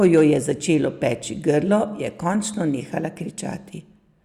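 Right at the start, from about 0.03 to 0.21 s, there's hard clipping. The level runs roughly 2 dB past what the chain can pass, so the peaks get sliced flat. You hear a brief crackly edge on the loudest moments just before "je začelo".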